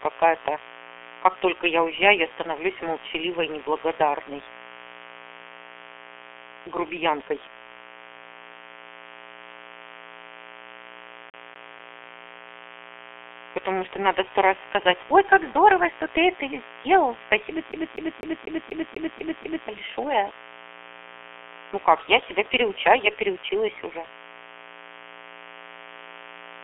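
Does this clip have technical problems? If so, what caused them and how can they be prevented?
Yes. A steady, raspy 60 Hz mains buzz runs throughout, roughly 20 dB below the speech. Switching spikes from a dimmer, rectifier or unshielded cable inject its harmonics. Use shielded, balanced cabling and keep audio lines away from dimmers and power supplies.

The G.723.1 codec muffles the whole clip, leaving nothing above 3.7 kHz, with hoarse, smeared consonants that point to a very low bitrate near 6 kbit/s. Use a wideband codec at a higher bitrate.

A CD stuck on one turn repeats a 246 ms loop three times from 11.3 to 12.04 s, and eight times from 17.72 to 19.68 s after "ты это сделал спасибо". A scratch throws the laser back a track. Clean or replace the disc, or rip it with error-correcting software.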